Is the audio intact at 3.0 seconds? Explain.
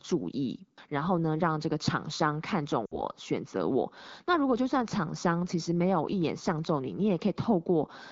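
No. Between 2.85 and 3.01 seconds, lost AMR speech frames fail their checksum, about 60 ms, which fits three 20 ms frames. The wideband decoder repeats the last pitch and vocal-tract settings at falling gain, so the speech drops to near silence within two frames, then returns briefly weak or rough.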